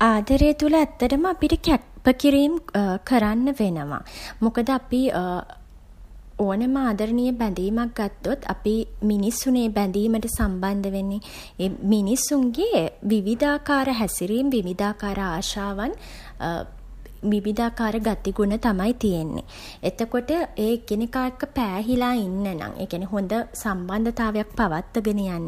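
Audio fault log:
No audible faults detected.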